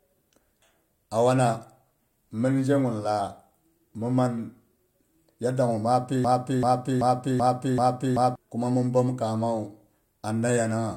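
At 6.25 s, right after "yadok gu ma pi", the speech falls into a broken-record loop: a 0.38 s fragment repeats exactly, back to back, five times until 8.36 s, resuming at "kuma mhin". The likely cause is a stalled player or stream resending its last buffer, so the intervening audio is lost.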